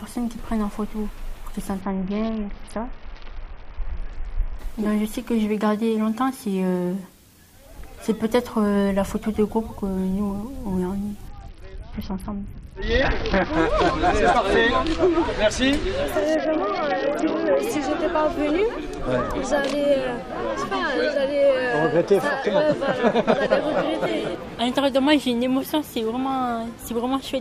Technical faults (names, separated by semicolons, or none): Bluetooth SBC bit pool drop